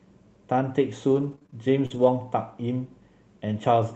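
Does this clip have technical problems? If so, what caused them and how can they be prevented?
Yes, there's repeated packet loss (robotic sound) from 1.07 to 2.08 s: six short dropouts, longest 41 ms, each patched by stretching the previous sound, so it turns choppy. To prevent it, use a steadier network link or give the jitter buffer more headroom.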